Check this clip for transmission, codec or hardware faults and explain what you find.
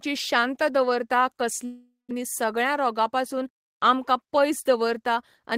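One transmission fault stands out, a long network dropout from 1.65 to 2.13 s, just after "शांत दवरता". The likely cause is a stretch of lost packets. The receiver stretches the last sound into a fading buzz, which thins to about 160 ms of silence before the speech resumes. About 400 ms of speech never returns, and the timing lands slightly late afterwards. A brief packet-loss glitch would skip only a few milliseconds and pick up where it stopped. Here the speech jumps ahead, with content missing.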